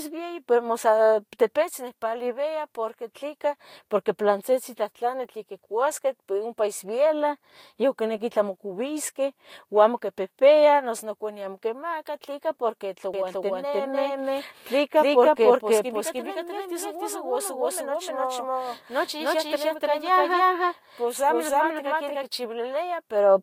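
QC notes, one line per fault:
13.14–22.24 s, doubled audio track: an undecaying full-band copy trails roughly 0.3 s behind at near-equal level, likely a slower second path or misaligned edit.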